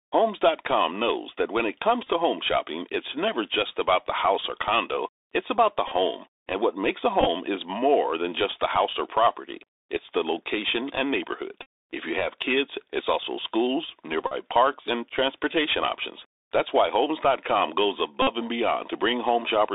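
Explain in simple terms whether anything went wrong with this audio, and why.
The recording went through a Bluetooth CVSD headset codec the whole way. This old phone-call codec keeps only roughly 300 Hz to 3.7 kHz, so the speech sounds thin and muffled, with a grainy hiss and scratchy s sounds. Unlike a brief glitch, that dullness never lets up.

There is also Bluetooth headset packet repetition six times: 2.02–2.10 s (after "knows that when it", before "home shopping it's never"), 5.88–5.93 s, 7.21–7.28 s (after "what makes a", before "is more than just"), 11.63–11.66 s (after "the location and neighborhood"), 14.27–14.34 s and 18.22–18.27 s. Small chunks of sound were lost between headset and phone, and the last chunk was replayed over and over. That gives a short, rough buzz rather than silence, which is how it differs from a plain dropout.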